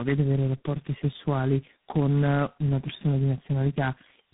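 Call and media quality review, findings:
Tandem speech coding, throughout. Call crossed several codec borders, with each link decoding and re-encoding already degraded speech; four lossy speech coders in series, last fitting G.726. Result: rough, muffled, warbly voice, band-limited with nothing above 3.8 kHz. Chain sounds consistent with GSM full rate, G.723.1 and repeated G.726 hops.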